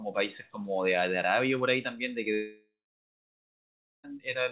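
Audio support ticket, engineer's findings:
Long network dropout, 2.34 to 4.05 s. Audio cuts out mid-stream; receiver extends the last sound as a decaying buzz/hiss for a few tenths of a second, then roughly 1.3 s of silence. About 1.7 s of audio never arrives; playback resumes past the gap without it. Likely cause: packet stream interrupted upstream, with loss concealment filling then muting. Call path audible as band-limited speech, nothing above 4 kHz, consistent with G.711 mu-law at 64 kbps.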